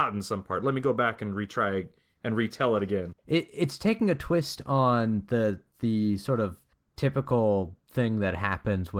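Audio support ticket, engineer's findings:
No audible faults found.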